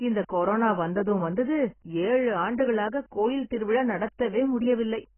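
AAC compression runs through the whole clip: the speech is dull and smeared, with nothing above about 3.1 kHz and a warbling, fizzy texture on sibilants. This heavy damage is likely from AAC-LC squeezing the spectrum to a very low bitrate, around 12 kbps.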